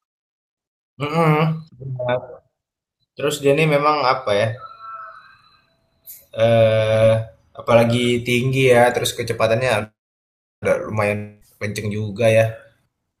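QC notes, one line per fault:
9.83–10.64 s, call audio freeze: the speech stops and its last sound carries on for roughly a tenth of a second as a fading buzz, then about 0.69 s of silence follows before speech resumes. Nothing is cut from it. Instead, everything after this point is pushed about 0.79 s later. The likely cause is delayed packets emptying the jitter buffer. On a spectrogram, a short smeared harmonic tail gives way to a blank band, and normal speech texture then picks up cleanly.
11.16–11.43 s, long network dropout: for about 0.25 s the speech is replaced by a continuation of its last sound, a buzzy, gradually fading hum with no silence at the end. When speech returns, about 0.26 s of it is gone, so it restarts mid-flow. The likely cause is a stretch of packets that never arrived. On a waveform, a decaying repetitive envelope ends in an abrupt jump. On a spectrogram, flat, stretched harmonics break into unrelated speech.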